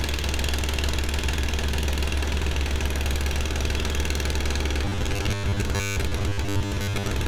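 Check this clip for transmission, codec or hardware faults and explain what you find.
Robotic sound from repeated short buffers runs from 4.85 s to the end at 7.28 s. The sound turns into a rigid, metallic buzz at 100 Hz that still loosely tracks the original sounds. The likely cause is audio arriving too seldom, with playback repeating roughly 10 ms chunks for about half the time while real audio is skipped.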